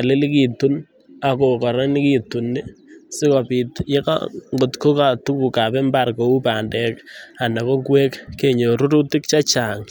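No technical faults are audible anywhere in the speech.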